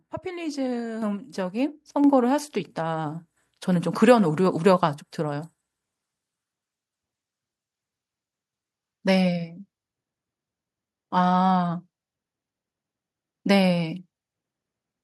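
At 1.02 s the level jumps by about 7 dB, and then at 2.04 s it climbs again by about 4 dB. That's the microphone volume stepped up, twice. The call software decided the mic was too quiet and bumped the device's input gain in one hard step each time. You hear the voice and the room noise get louder together, instantly, with no fade, so it sounds like someone nudged the fader.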